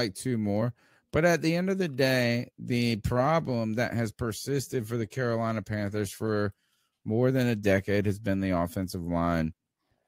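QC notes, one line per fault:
Nothing stood out on listening to the speech in this clip.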